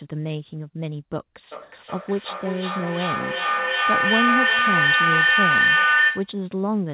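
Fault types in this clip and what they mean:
Feedback howl: a loop between a microphone and a loudspeaker on the same call adds gain on every pass, so the sound narrows to a tone near 2 kHz that grows from 1.52 s until it stops at 6.42 s, peaking about 6 dB above the speech and pulsing roughly every 400 ms. A spectrogram shows a thickening horizontal line near 2 kHz. The waveform's envelope swells in regular beats.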